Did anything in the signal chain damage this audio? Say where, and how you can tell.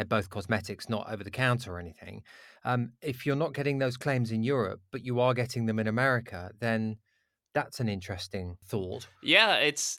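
No, nothing along the chain seems to have hurt this speech, and I can't point to any stage where something went wrong.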